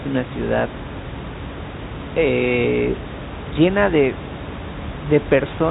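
No technical faults are present in the speech: the room noise sits about 12 dB below it as part of the recording, and the G.711 telephone coding holds the sound to a narrow band with nothing above 3.8 kHz, which fits A-law coding at 64 kbps.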